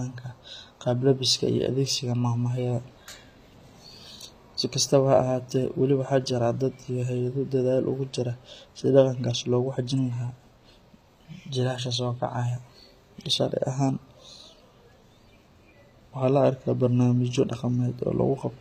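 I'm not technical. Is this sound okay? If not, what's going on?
No. From start to finish the speech carries HE-AAC compression damage, and it is plainly audible. This kind of squeezing likely comes from a low-data-rate setting: it keeps only the lower, fuller part of the sound and then invents the crisp top end by copying lower parts upward. That copied treble isn't the real thing, so s sounds come out gritty, metallic or lisping.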